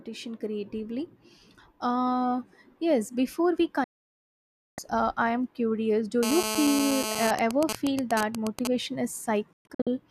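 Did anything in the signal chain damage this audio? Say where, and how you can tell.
Yes. A digital broadcast dropout, a reception fault, mutes the sound from 3.84 to 4.78 s, losing about 0.94 s, then breaks it into several short holes from 9.53 to 9.87 s, with the longest 120 ms. Each edge fades within 3 ms. Codec concealment would smear the gap, but here the material is simply missing.

A GSM phone buzz enters the analogue wiring from 6.23 to 7.31 s. It is a hard, raspy 217 Hz tone, about 3 dB below the signal and steady, from a phone in a call whose radio pulses are rectified. Mains hum would sit at 50 or 60 Hz and sound smoother.

GSM signalling bursts follow from 7.39 to 8.67 s, entering through the same analogue path. This time the sound is a pattern of even ticks with a longer 217 Hz buzz twice a second, a few dB below the signal. The phone is sending only sparse bursts while its user is silent, which is why it sounds broken up rather than continuous.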